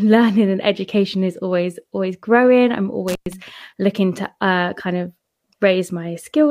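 A loose cable or plug briefly loses contact between about 3.08 and 3.33 s, opening the line for about 111 ms. This intermittent contact cuts the speech out abruptly, with crackle at the break and return and faint hiss through the gap.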